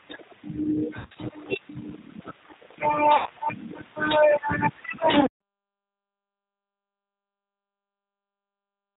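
Throughout, the speech has the band-limited, slightly rough, synthetic quality of G.729 coding, consistent with 8 kbit/s, with nothing above 4 kHz. At 0.99–1.16 s, 3.16–3.31 s and 5.21–5.28 s, VoIP packet loss is concealed by the speech codec. The decoder extrapolates from its last frames, leaving a buzzy or noisy, fading smear and weakened speech afterwards.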